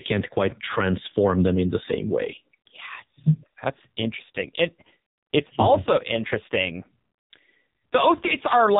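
AMR narrowband mobile codec damage runs through the whole speech clip. The audio has been squeezed into an 8 kHz, vocal-tract-model coder, so nothing above 4 kHz survives. The heavy buzzy, synthetic quality fits a low mode around 5.9 kbps.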